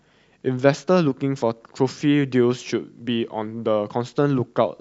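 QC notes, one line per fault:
No faults heard in this speech recording.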